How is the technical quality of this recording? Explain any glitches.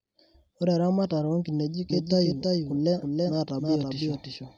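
The recording has one clear fault, a doubled audio track, from 1.90 s to the end of the clip, just after "eramatare o nkineji". The likely cause is the speech being captured a second time through a slower path, or an edit that leaves two copies out of step. A second full-band copy then runs around 300 ms behind, roughly 5 dB quieter. It begins abruptly and has no decay or room colour, so every syllable gets a dry, distinct echo.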